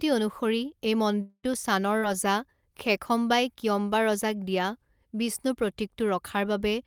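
Right after "অনুসৰি এই", from 1.21 to 1.46 s, the sound carries on as a fading buzz for around 0.22 s, then drops to silence for about 40 ms. That's likely a long network dropout, with the receiver stretching the last sound until it ran out and the missing stretch never coming back.

Overlapping the end of that, from 1.43 to 1.45 s, a 20 ms lost packet was rebuilt from error correction, so it plays as a rougher, noisier bit where the low-bitrate backup copy stood in for the real packet.

At 1.99 to 2.05 s there's a short concealed packet loss: about 40 ms went missing and roughly 32 ms of it was papered over by extending the previous sound, so you get a quick smear or wobble. Inside that, from 2.02 to 2.04 s, another 20 ms packet was rebuilt from its backup copy, adding a brief grainy patch.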